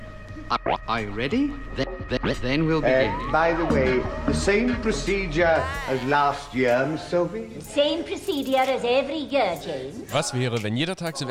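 Nothing is technically wrong with this audio clip, and no faults can be heard at any point in it.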